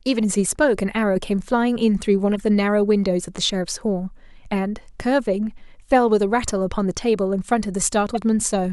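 Corrupt frames were decoded at 1.16–1.18 s, 2.34–2.41 s and 8.10–8.17 s. Damaged data put energy at wrong frequencies. Each causes a brief chirp or noise burst.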